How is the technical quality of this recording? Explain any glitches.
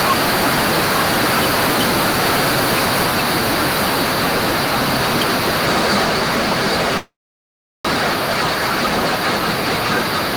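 The recording is poor, with distortion throughout and a freeze in the middle.

Hard clipping runs through the whole speech clip: the signal is overdriven by about 11 dB and flattened, leaving a constant harsh fuzz on loud sounds.

Microphone overload, from 0 to 6.04 s, adds a harsh crackle on the loudest syllables. Input gain was likely set too high, with about 6 dB of overshoot clipping roughly a fifth of samples.

Microphone volume stepped down at 6.04 s: the level drops by about 2 dB in one sudden step, with voice and background falling together. This is unlike a fade, and likely an automatic gain correction.

Call audio freeze from 6.97 to 7.87 s: a brief fading buzz or hiss is followed by about 0.73 s of silence, likely from a stalled jitter buffer. Speech then resumes where it stopped, so nothing is lost, unlike a dropout.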